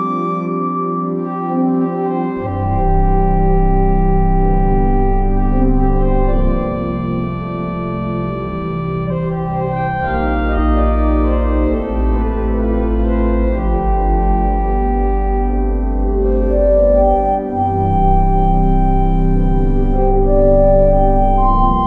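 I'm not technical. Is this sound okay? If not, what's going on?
No. Compressed frames skipped: chunks of the compressed file went missing or were rejected. The sound jumps ahead: a tiny skip at 2.42 s, and longer ones at 9.06 s and 10.55 s.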